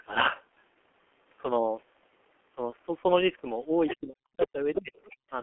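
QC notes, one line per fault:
Throughout: G.723.1 codec. The whole recording has the muffled, hoarse character of this low-rate telephony codec at 6.3 kbit/s. The band runs from 250 Hz to 3.4 kHz, so there is no real bass and no air, and the codec damage is heavy. Its 30 ms frames and slowly updated voice model smear consonants into one another. On a spectrogram the energy sits in a flat band with hard edges near 250 Hz and 3.4 kHz. Above that is empty, and the fine harmonic detail looks blurred.
3.88–3.97 s and 4.97–5.15 s: other side's voice leaking through. Two short scraps of a second voice come through. The first is fairly strong, about 10 dB under the main speech, and the second is faint, about 25 dB under. The far end was likely playing on a loudspeaker that the echo canceller did not fully remove from the microphone. On a spectrogram these show as brief, thin bursts that are separate from the main talker's harmonics.
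4.00–4.94 s: speech suppressed in double talk. For about 0.7 s in total within this span the main speech dips, sometimes by roughly 40 dB. The likely cause is the echo canceller turning everything down when both sides spoke at once. The waveform shows the envelope collapsing in chunks. The spectrogram shows the speech bands fading or vanishing in blocks rather than trailing off naturally.
4.10 s: VoIP packet loss concealed by the speech codec. One frame, 30 ms, went missing, and the decoder filled it from the previous frame's pitch and filter. It lowered the gain as it went, so the gap comes out as a short, fading concealed stretch instead of silence, and the speech stays weak or distorted right after it. On a spectrogram this looks like a short stretch with falling energy.
5.22–5.29 s: background gated by the echo canceller. The room sound drops out for about 70 ms, up to about 38 dB down. 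This happens while the canceller clamps the microphone against loudspeaker output, and the sound comes back when it releases. The waveform shows a near-flat gap in the noise floor with abrupt edges. On a spectrogram a narrow vertical dark band cuts through the background.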